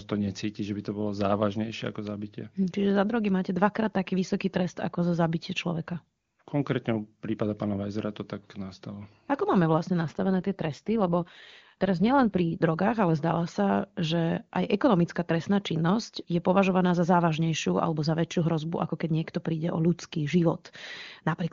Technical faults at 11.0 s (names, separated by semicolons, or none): AMR rate drop